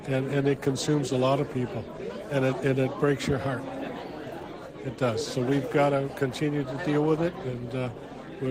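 No technical faults can be heard anywhere in the recording. Nothing in the audio calls for comment on that score.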